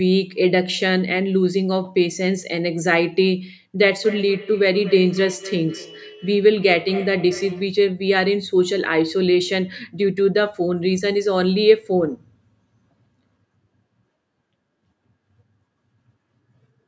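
From 3.79 to 7.88 s the speech picks up a feedback echo between two devices: a second device in the room replays the call audio, and this microphone captures it again, beyond the reach of its own echo canceller. Each syllable returns about a fifth of a second later, thinner and ringing, peaking about 16 dB below the direct speech. On a spectrogram, which stops at 8 kHz from the call processing, faint copies of each onset trail at that spacing; the waveform shows matching low-level echoes after each burst.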